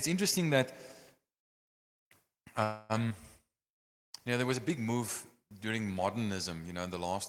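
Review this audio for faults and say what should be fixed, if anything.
Packets were likely held up in transit from 2.63 to 2.92 s, draining the jitter buffer. The receiver stretched the last sound into a fading buzz for about 260 ms. That is a call audio freeze: the speech then resumes where it stopped, losing nothing but arriving later.

At 3.09 to 3.13 s a stretch was dropped, in transit or by an overflowing jitter buffer, while later audio was already waiting. The result is a skip ahead: roughly 70 ms of speech vanishes and the two sides are spliced almost directly, leaving an abrupt jump.

From 3.49 to 4.48 s, just before "was a big move", the jitter buffer ran low and rebuilt its reserve by repeating single pitch periods. This jitter buffer slow-down adds 78 ms, so speech plays at about 93% speed with unchanged pitch and slightly drawn-out sounds.

Fix the network path's delay spikes and give the jitter buffer a steadier adaptive target, so it neither runs dry nor overflows and then has to discard or stretch audio.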